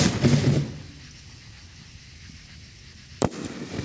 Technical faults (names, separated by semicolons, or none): gain pumping